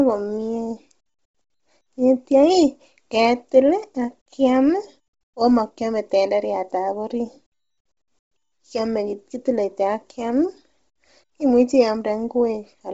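Throughout the speech, nothing reaches above 7.8 kHz, and the upper band carries a breathy, grainy hiss instead of real detail. This is likely Bluetooth LC3 compression at a low bitrate near 24 kbps, filling discarded highs with noise rather than leaving the plain dullness of a simple low-pass filter.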